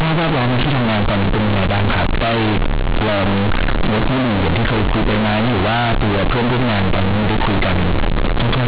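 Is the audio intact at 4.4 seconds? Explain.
No. At 4.4 s, as throughout, mu-law bytes are read as linear 8-bit samples. This companded audio read as linear gives loud buzzy distortion and heavy noise in pauses, unlike ordinary clipping.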